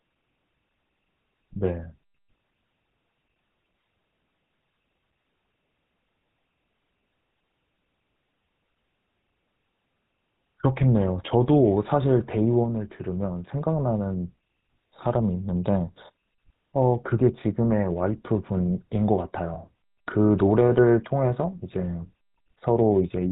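Throughout, the speech carries the buzzy, gravelly roughness of the GSM full-rate codec, which fits a 13 kbps coder rebuilding the vocal tract from sparse, regularly spaced pulses and passing nothing above 4 kHz. Unlike simple low-pass filtering, it adds a grainy rasp as well as dullness.

At 2.38 s, and again from 19.54 to 19.58 s, lost GSM frames make the decoder repeat the last good frame. Each gap becomes a brief, rough metallic ring rather than the silence or click of a plain dropout.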